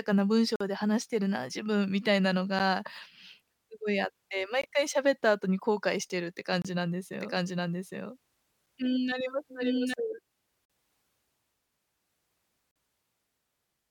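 Hard-edged dropouts cut the speech at 0.56 s (about 46 ms), 2.59 s (about 10 ms), 4.61 s (about 20 ms) and 6.62 s (about 28 ms). Each is a sudden hole of pure silence with abrupt edges, and they fall roughly every 2 s. This is a gap between stream segments. The timestamps of adjacent 2-second segments don't quite meet, so the player inserts silence to bridge the gap. The holes add time, but none of the speech is lost.

From 7.13 s to 9.94 s the speech is heard twice. A second, full-band copy runs about 0.7 s behind the first at roughly the same loudness. It has no reverberant tail or room colouring, and it switches on and off abruptly at both ends. This is a doubled audio track. It is likely caused by the same signal being captured a second time through a slower path and mixed back in.

After the doubled passage, the same segment gaps return at 10.65 s (about 44 ms) and 12.71 s (about 45 ms), continuing the 2-second rhythm with the same clean, silent holes.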